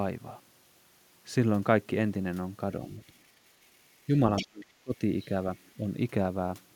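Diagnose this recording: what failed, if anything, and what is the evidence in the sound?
Call processing is the stage at fault. From 4.36 to 4.47 s, a second voice from the other side leaks through, roughly 10 dB below the main talker. This other side's voice leaking through is likely residual echo: the far end reached the microphone from the device's loudspeaker, and the echo canceller's adaptive filter did not model that acoustic path closely enough to subtract it, so a short burst survived into the outgoing signal.

The same echo-control stage then suppresses speech in double talk from 4.43 to 5.01 s, overlapping the leak. The talker's level is turned down for about half a second in total, dropping by as much as roughly 35 dB at its deepest. The likely mechanism is that, with both sides active, the canceller could not separate near-end speech from loudspeaker echo and its suppressor attenuated everything.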